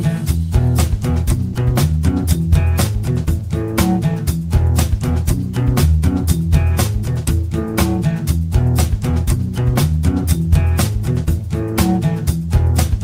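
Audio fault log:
1.53–1.55 s, sound dropped by the voice detector: for about 20 ms the audio gives way to steady noise or near silence, then resumes. The likely cause is a sender-side voice detector misjudging a quiet moment as background and pausing transmission, with the receiver filling the gap with comfort noise, which fits Opus-style discontinuous transmission. On a spectrogram it shows as a narrow vertical strip of smooth, featureless noise or near silence. On the waveform, a brief low, even patch cuts into the envelope.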